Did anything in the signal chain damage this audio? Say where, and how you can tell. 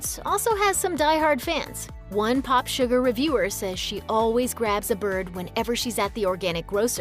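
No, nothing in the signal chain damaged this audio.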